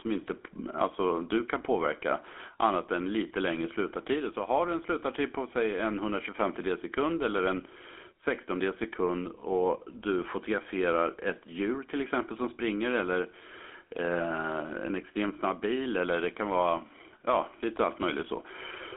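The speech was coded throughout by the GSM full-rate codec. Its pulse-driven vocal-tract model, at what sounds like 13 kbps, leaves a buzzy, gravelly roughness, with a line band of about 250 Hz to 3.4 kHz.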